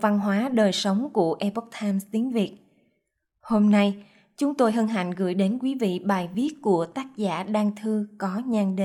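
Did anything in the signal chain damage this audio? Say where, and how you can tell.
No, the signal chain is undamaged.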